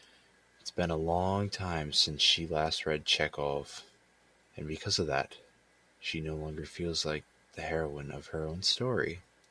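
No technical faults are audible anywhere in the speech recording.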